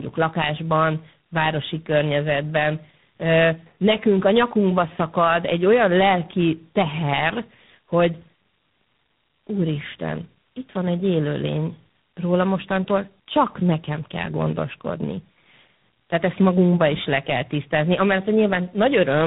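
From start to finish, the speech carries tandem speech coding. The call passed through two speech codecs in a row, decoded and re-encoded at the border. The sound points to a low-rate mobile codec feeding a G.726-style ADPCM stage. Each stage compresses the errors left by the one before. Nothing survives above 3.8 kHz, so the speech sounds muffled. The stacked coding adds a rough, warbly texture throughout.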